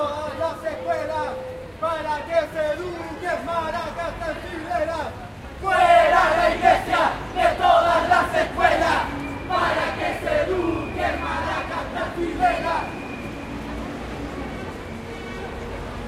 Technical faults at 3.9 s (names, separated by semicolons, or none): none